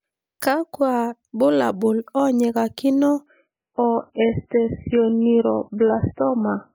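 An adaptive stream dropping to a lower bitrate takes over at 3.26 s, right after "bulabul onyikakino", and lasts to 6.75 s. With no gap, the speech turns thin and smeared, with nothing above 3 kHz, which fits a fall from roughly 128 kbit/s MP3 to about 8 kbit/s.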